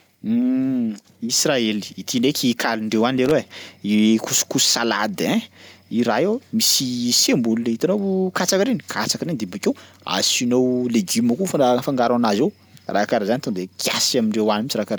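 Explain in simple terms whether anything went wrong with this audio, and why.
Something went wrong briefly at one point: a loose connector crackle from about 3.18 to 3.31 seconds. A plug or cable contact in the recording chain was worn, dirty or not seated firmly, so when it shifted, the electrical connection kept breaking and reconnecting very quickly. Each break chops the signal for an instant. In this speech clip, that comes through as a short, ragged burst of scratchy crackling lasting just over a tenth of a second.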